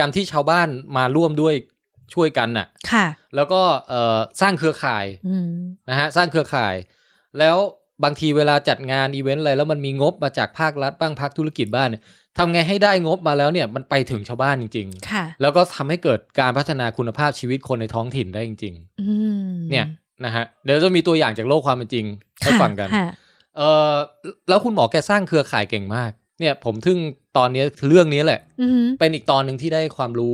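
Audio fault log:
Nothing to log here; I listened to this speech clip and didn't catch any faults.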